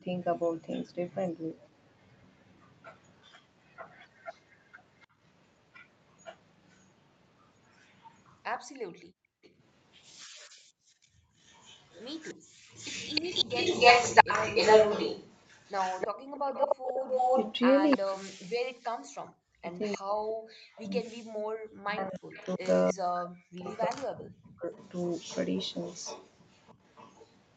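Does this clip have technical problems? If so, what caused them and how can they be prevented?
Yes. A delayed copy of the speech trails it by about 303 ms, faint from 0.71 to 5.07 s and as loud as the speech from 6.7 to 17.98 s. It returns more quietly at 19.83 to 19.98 s, 22.29 to 22.93 s and 24.73 to 27.36 s. This is likely an echo leak: the far side's loudspeaker output reached its microphone, and its echo canceller let part of it back. Prevention: use a headset on the far side, or lower its speaker volume and give the canceller a correct delay estimate.

The room sound drops out by about 40 dB across roughly 2 s between 8.6 and 12.68 s, and again by about 39 dB at 16.11 to 16.4 s. This is background gated by the echo canceller, which clamped the microphone hard while the loudspeaker played. Prevention: use gentler suppression with comfort noise so the background stays steady.

From 17.96 to 24.68 s the speech dips and breaks up, falling by around 40 dB for roughly 5 s in total. 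This is speech suppressed in double talk, likely caused by the canceller muting its own talker while both sides spoke. Prevention: use a canceller with better double-talk detection, or reduce the far-side echo so less suppression is needed.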